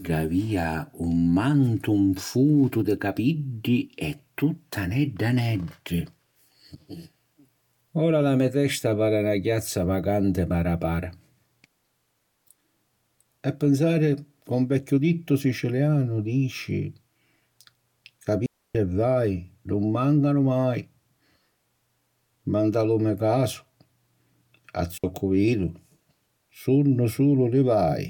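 A digital wireless dropout occurs twice: the radio link lost too much data, so the receiver muted with a very short fade. This leaves clean holes of near silence in the speech, from 18.46 to 18.75 s and from 24.98 to 25.04 s, with no noise burst on either side.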